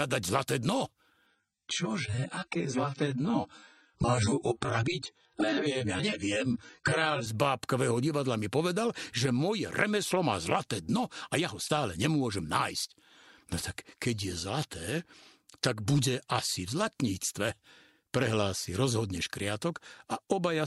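From 1.26 s to 7.26 s the adaptive stream dropped to a lower bitrate, as if the connection slowed and the player switched to a leaner version of the same audio. The quality falls abruptly with no gap: nothing survives above 9.1 kHz, so the top end goes dull, and compression artefacts thicken. The degradation points to a step from roughly 96 kbit/s down to about 16 kbit/s AAC. Full quality returns just as suddenly at 7.26 s.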